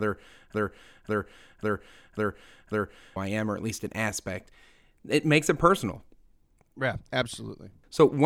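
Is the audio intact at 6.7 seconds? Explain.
Yes, the speech at 6.7 seconds plays through intact, with no dropout, click, distortion or other fault at that moment.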